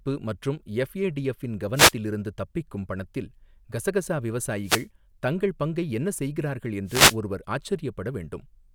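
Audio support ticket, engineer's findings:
Wireless microphone noise hit at 1.75–1.93 s after "மற்றும் எஃப்ஏடிஎஃப் இன்", 4.63–4.87 s after "இருந்து தப்பிக்கும் பணத்தில் கசகசா", and 6.86–7.17 s after "தங்கள் பங்கை என்ன செய்கிறார்கள்". Brief static swish over speech. Analogue FM radio link: reflections cancel the signal, and receiver noise surges through.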